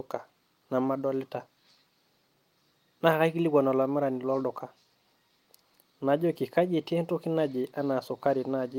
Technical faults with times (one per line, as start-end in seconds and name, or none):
none